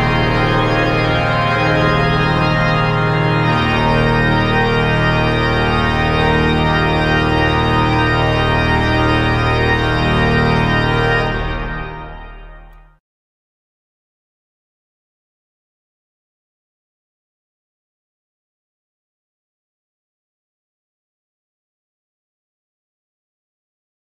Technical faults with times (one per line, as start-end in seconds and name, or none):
none